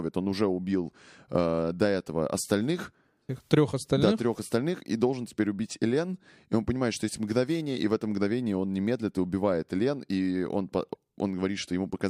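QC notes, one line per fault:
10.93–10.97 s, broken MP3 bit reservoir: a brief garbled skip after "и он", likely from dropped frames leaving the next frame reading another frame's reservoir bytes.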